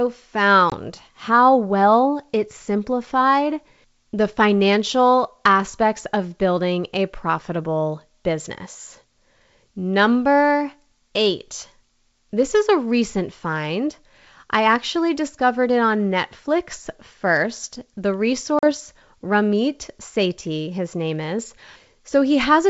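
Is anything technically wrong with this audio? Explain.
Yes, there is packet loss on an ADPCM call, heard as two hard-edged silent gaps near 0.70 s (about 20 ms lost) and at 18.59–18.69 s (about 40 ms lost). After each gap, the decoder's adaptive predictor and step size no longer match the sender's. The speech then comes back slightly distorted until it resettles within a few tens of milliseconds. The wideband G.722 coding itself sounds clean around these gaps.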